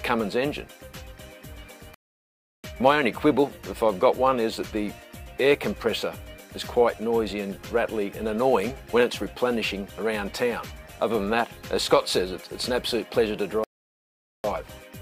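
At 1.94 s the sound halts in a rebuffering stall until 2.64 s, then resumes exactly where it stopped, as the player ran out of downloaded audio. A second stall runs 13.64 to 14.44 s. Each is a flat, empty gap in the waveform and a blank column on the spectrogram, adding 0.70 s and 0.80 s with nothing lost.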